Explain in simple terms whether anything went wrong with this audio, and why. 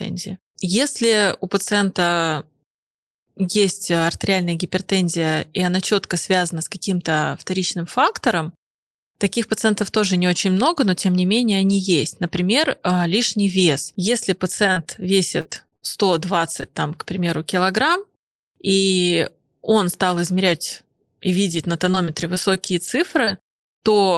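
A few things went wrong, all of them the kind of glitches you get on a shaky internet call.

The biggest issue is repeated packet loss, which gives a robotic sound. Between 14.05 and 15.83 s, chunks of the audio went missing seven times, about a fifth of a second in total, with the longest hole around 60 ms. The receiver plugged each hole by stretching out the last bit of sound. Because the holes come one after another, the speech turns choppy. The same thing returns from 21.51 to 23.96 s, with 14 holes adding up to roughly 210 ms, none longer than about 50 ms.

Around 16.5 s there are two lost packets rebuilt from error correction, at 16.47 and 16.62 s, just before "там к примеру килограмм". Each one lost only 10 ms. The following packet carried a rough backup copy of the missing piece, so there's no silence. Those tiny moments just come out rougher and noisier than the speech around them.

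Right next to those, also before "там к примеру килограмм", are two short concealed packet losses, at 16.61 s and from 16.71 to 16.73 s. Each is about 10 ms that arrived too late to use. The decoder guessed the missing bit by carrying the previous sound forward and then blending back in. That leaves a brief smear or wobble rather than a clear gap.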